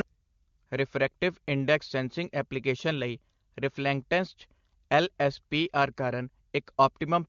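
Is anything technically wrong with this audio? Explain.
No, nothing technically wrong can be heard here.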